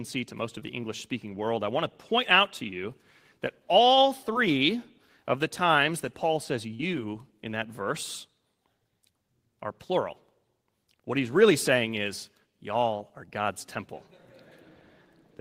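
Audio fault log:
0.59 s, 4.33 s, 6.75 s, 12.97 s: short concealed packet loss. Each is a brief smear or wobble, the first after "to most", the second after "to you that all". 20 to 40 ms of audio arrived too late, so the receiver extended the preceding sound and blended back in.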